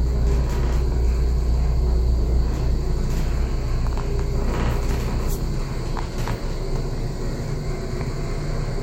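The clip is a recording of sounds, and nothing is technically wrong with it.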